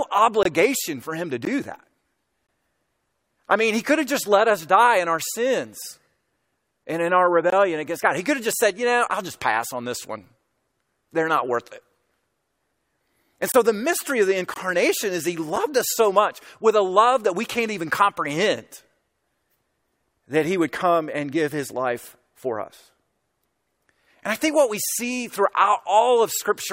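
Short hard-edged dropouts land at 0.43, 1.45, 2.47, 7.50, 8.52, 13.52 and 14.54 s. It's a gap between stream segments: one-second chunks whose timestamps don't quite meet, so silence fills each gap, about 4 to 23 ms, with no speech lost.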